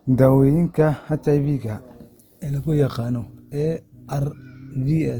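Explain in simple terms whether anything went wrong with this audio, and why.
From start to finish the speech sounds rough and grainy, with a fizzy, noisy edge, though it stays bright rather than muffled. That is likely Opus compression squeezed too hard: short of data, it patches in detail with noise instead of the real sound.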